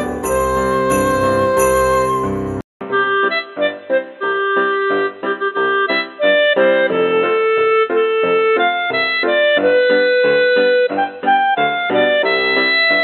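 Input switched to a poorer device at 2.61 s, after a 200 ms silence; from there to the end the audio turns dull and boxy with nothing above 4 kHz, a new, faint noise floor and a noticeable level shift, likely from a narrowband headset or microphone taking over.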